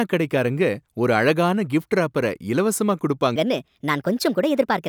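A speech clip with a section at the wrong speed: after "ஒரு அழகான கிஃப்ட்ராப்பர இலவசமா", from 3.36 s to the end, playback jumps to 1.33 times speed and the voice rises about five semitones together, likely from a mismatched playback clock. A pure pitch shift would leave the timing unchanged.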